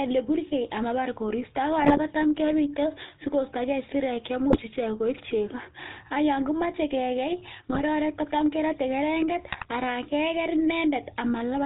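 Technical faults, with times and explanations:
Throughout, GSM full-rate codec: the speech has the buzzy, gravelly roughness of this vocal-tract model driven by a sparse, regularly spaced pulse excitation. The damage is plainly audible, nothing above 4 kHz comes through, and the character fits a 13 kbps full-rate stream.
1.78–1.99 s, 4.50–4.61 s, 7.70–7.82 s and 9.52–9.66 s, GSM bit errors: the speech briefly breaks into squawks, pops and gargling. Corrupted filter, pitch or gain parameters reach the decoder, warping the spectrum or spiking the level over a run of frames.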